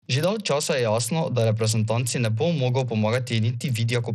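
From start to finish the speech has plainly audible codec damage, most likely Bluetooth SBC compression at a starved setting. Nothing comes through above 15.2 kHz, and the top end that remains flickers in and out as the encoder's crude bit allocation starves the upper sub-bands. The coarsely quantised bands below leave a gritty grain with some aliasing over the sound, which fits a low bitrate of around 80 kbps.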